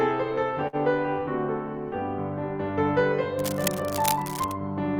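At 0.67 s the music hits a short stall from a late packet. The jitter buffer ran dry, so the receiver held the last sound for about 56 ms until the packet arrived, then resumed where it left off. Nothing is lost, but playback now runs about 56 ms later, and the held moment has a slight buzz or dip that ends at 0.76 s.

From 3.38 s to 4.55 s, cable scratch noise rides over the music: dense, irregular bursts of crackle and rustle, roughly 10 dB below the music. The likely cause is a worn cable, connector or control being moved, its contact resistance fluctuating rapidly.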